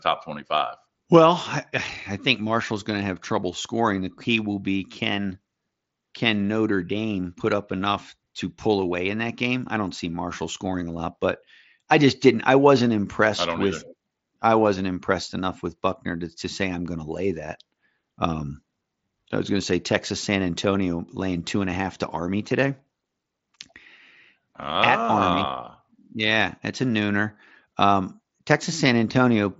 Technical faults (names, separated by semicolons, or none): none